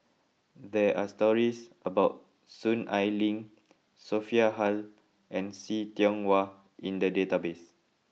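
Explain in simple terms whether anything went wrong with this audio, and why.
Nothing went wrong with this speech recording. No faults can be heard anywhere in it.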